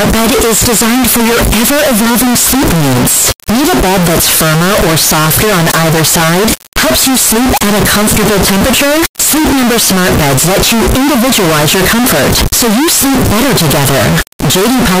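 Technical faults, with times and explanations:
Throughout, float read as integer: the speech is pushed into a harsh, nearly square waveform at an almost fixed, high level, with background noise as loud as the talker, though pitch stays traceable. This fits 32-bit float samples likely being decoded as 32-bit integers.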